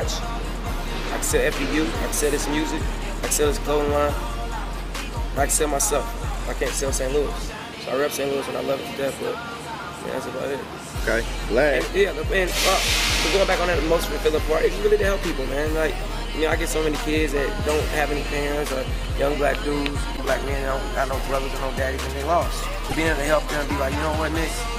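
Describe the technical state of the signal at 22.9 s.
A brief disruption in the sound runs from 22.87 to 22.93 s, about 60 ms. It is the kind of disruption that comes out as a chirp, squawk, click or short hole. This is damaged data in a compressed stream. Bytes in that stretch of the encoded file were lost, blanked or overwritten, so the decoder could not read those frames properly. It lost sync and had to hunt for the next valid frame header before normal decoding resumed.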